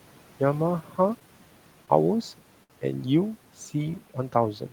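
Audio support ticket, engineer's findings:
Speech cut by the noise suppressor, 0.82–0.97 s. Speech level dips by about 10 dB for around 150 ms. It sounds swallowed and faint. Probable component: noise suppressor. It misread quiet speech as background and attenuated it along with the room noise. That room noise sits about 21 dB under the speech and is not a fault.

Short stall from a late packet, 1.86–1.91 s. Sound is held about 17 ms too long, with a slight buzz or dip. Nothing is lost. Probable component: jitter buffer. It ran dry, so the receiver stretched the last audio until the packet landed. Playout delay grew by 17 ms.

Short stall from a late packet, 2.64–2.73 s. This is the same symptom, but larger: a 62 ms hold with a slight buzz or dip. No content is missing. Same mechanism: the buffer underran and the receiver extended the audio to fill the gap. Playout delay grew by 62 ms.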